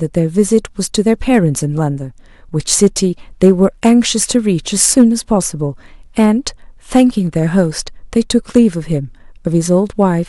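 The whole clip suffers from hard clipping. The speech is driven about 8 dB harder than some stage in the chain can pass, so the loudest peaks get chopped flat at the ceiling. Only a small fraction of samples, well under one percent, actually hit that limit, so it's not a constant fuzz. You hear brief crackly, gritty edges on the stronger syllables, where those squared-off tops throw extra harmonics high into the spectrum.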